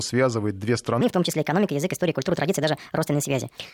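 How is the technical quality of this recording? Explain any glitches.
The recording has one clear fault: a section at the wrong speed. From 1.01 s to the end, the speech runs 1.4 times faster than normal, and its pitch rises by about five semitones along with it. The likely cause is a clock mismatch during editing or playback, where that section was read out at a higher rate than it was captured. Because speed and pitch are locked together, the voice abruptly turns hurried and chipmunk-like at the transition.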